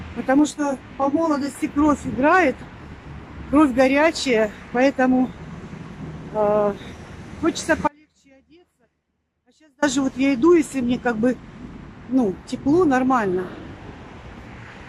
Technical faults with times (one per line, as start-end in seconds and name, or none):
0.39-1.55 channel delay (comb filtering)
7.88-9.82 audio dropout to a faint residue